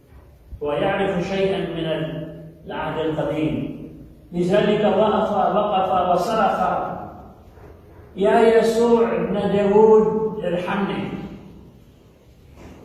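No technical faults can be heard at any point in the clip.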